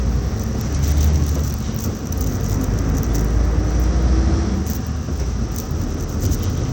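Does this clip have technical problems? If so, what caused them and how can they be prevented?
Yes. Bluetooth SBC compression is plainly audible throughout, likely from an SBC link at a bitrate near 96 kbps, starving the upper sub-bands; gritty treble and nothing above 19.8 kHz. Prevent it by recording over a wired connection or using a higher-bitpool or better Bluetooth codec.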